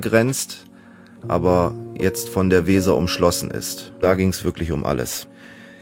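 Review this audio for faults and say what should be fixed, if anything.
Nothing needs fixing here, as the signal holds steady throughout with no dropouts, distortion or other technical disturbances to be heard.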